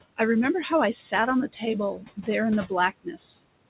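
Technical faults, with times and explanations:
Throughout, noise suppressor artifacts: the room noise sinks by about 21 dB in the gaps and rises again under the speech, so the background pumps. The suppressor decides band by band and frame by frame what counts as steady noise, and it turns those bands down hard wherever no speech seems to be present. The audio also has nothing above 4 kHz, which fits a narrowband telephone codec on the call path.
1.98–2.28 s and 3.04–3.19 s, speech cut by the noise suppressor: in each stretch part of the speech goes faint and swallowed, with about 150 ms of the first and 100 ms of the second actually dipping. The first loses about 11 dB at its deepest, the second about 17 dB. Soft, noise-like parts of the speech resembled the steady background closely enough that the suppressor pulled them down along with it. That is why the affected speech there drops away instead of sounding through.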